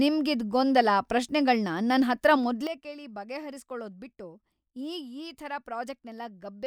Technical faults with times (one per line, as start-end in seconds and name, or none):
2.67-6.66 sudden gain jump